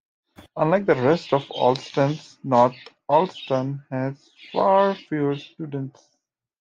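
Clock slip clicks run from 0.26 s to 6.47 s, recurring roughly every 0.15 s, about forty in all. Two unsynchronised clocks likely drift apart by around 150 ppm, forcing a single-sample drop or repeat each time, heard as faint, regular ticks under the speech.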